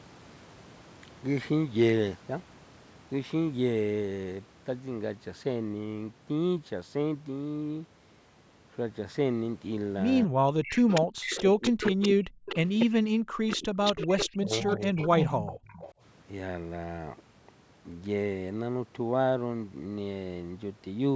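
A speech recording from a call, band-limited by the call's microphone processing so that nothing reaches above 8 kHz, with a cluster of echo-canceller faults between about 10 and 16 s. Speech suppressed in double talk appears at 10.25–10.44 s and again across 11.42–14.98 s, where the voice dips by as much as around 40 dB, roughly 3 s of it affected in the longer stretch. The likely cause is the canceller mistaking simultaneous near- and far-end talk for echo and attenuating both. An echo leak follows, a copy of the voice trailing by 246 ms, heard at 10.63–12.08 s, 12.49–12.86 s and 13.51–15.93 s. It sits roughly 10 dB below the speech, rising to about 5 dB below in the middle burst, and is likely residual loudspeaker pickup the canceller failed to subtract. Background gated by the echo canceller shows at 11.03–11.14 s, where the room sound drops by about 40 dB for around 100 ms and then returns as the canceller releases the microphone.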